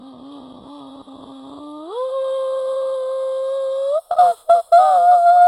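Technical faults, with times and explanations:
0.00 to 3.98 s, adaptive stream starting at a low bitrate: the music sounds dull and smeared, with nothing above about 11.1 kHz and any brightness thin and synthetic, then snaps to fuller, cleaner quality at 3.98 s with no gap. The player began on a cheap version of the stream, which sounds like HE-AAC at around 12 kbit/s, and switched to what points to AAC-LC near 96 kbit/s once it had measured the connection.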